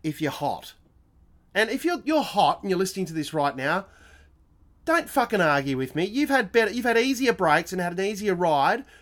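No technical faults can be heard anywhere in the speech recording, which runs as one continuous, uninterrupted signal.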